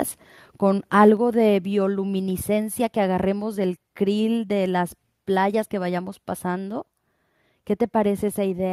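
From 1.0 to 1.09 s the loudest part of the speech takes on a harsh, crackly edge, with its peaks flattened about 1 dB past full scale across a small fraction of samples. This is microphone overload, likely from input gain set so high that the converter ran out of headroom and shaved off the waveform tops.

At 1.17 s the voice and the room behind it drop together by about 5 dB in a single abrupt step. This microphone volume stepped down event points to the call software reacting to the clipped peak just before and lowering the device's input level all at once.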